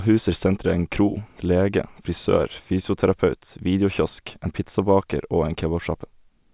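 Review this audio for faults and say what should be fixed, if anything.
Nothing here needs fixing; no faults can be heard.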